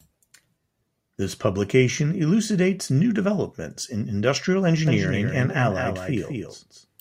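At 4.87 s, just after "new developments in industrial", a doubled audio track cuts in abruptly and runs to the end. A full-band copy of the speech, a few dB quieter, trails about a fifth of a second behind without any room decay, likely from a second, slower capture path.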